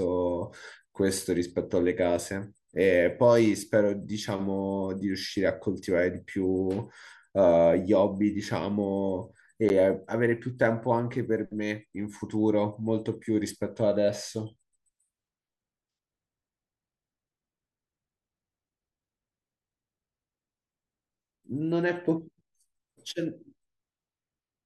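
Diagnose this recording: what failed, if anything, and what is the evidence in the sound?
A block of digital silence at 9.69 s points to a driver or buffer failure. The speech drops out for about 10 ms and returns abruptly. There is no fade. It reads as one short tick. The output buffer went unfilled in time.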